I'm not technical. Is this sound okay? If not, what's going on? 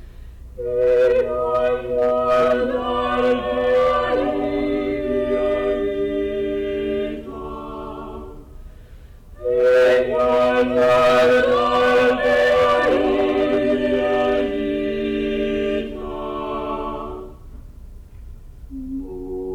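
No. There is hard clipping from 0.82 to 4.74 s, briefly at 5.17 to 5.72 s, and worst from 9.58 to 14.41 s. The sound was too loud for the recording to hold, so its peaks were sliced flat. That adds a harsh, buzzy edge only on the loud moments, unlike steady hiss.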